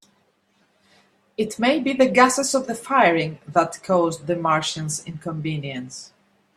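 Nothing technically wrong turns up in this short speech recording; there's no fault here to point to anywhere along its run.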